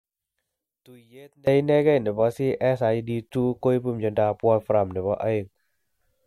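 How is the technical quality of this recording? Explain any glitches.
There's one real glitch. From the start to 1.47 s the speech drops by about 27 dB, likely one channel inverted, cancelling the shared centre content in mono.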